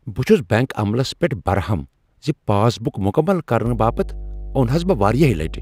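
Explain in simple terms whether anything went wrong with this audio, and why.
Mains hum starts at 3.66 s and runs to the end: a steady, fairly loud 50 Hz buzz, likely from a ground loop or nearby transformer leaking electricity into the recording.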